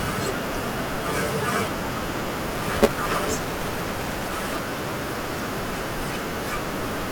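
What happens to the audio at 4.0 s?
A robotic 172 Hz rattle covers 2.52 to 4.59 s. This is buffer tearing, where about half of each buffer replays audio roughly 10 ms old.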